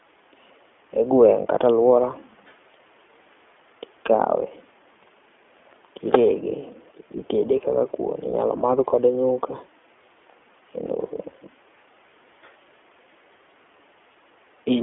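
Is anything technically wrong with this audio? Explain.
Yes. Throughout, the speech passes through the iLBC codec, coding each 20 ms frame independently in a narrow 300 Hz to 3.4 kHz band, which fits its 15.2 kbps mode. The result is plainly rough, synthetic and muffled.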